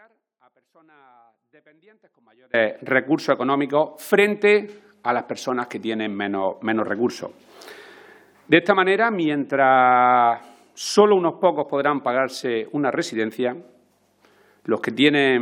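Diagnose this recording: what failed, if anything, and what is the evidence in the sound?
The fault is an audio dropout to a faint residue, already under way when the recording begins. From 0 to 2.54 s the wanted sound is missing. What remains is a faint leak about 35 dB below normal level. At 2.54 s the full signal returns abruptly, not as a fade. The path after the break stayed live throughout. The likely stage is the analogue wiring, such as a loose or intermittent connection that let only a trace through.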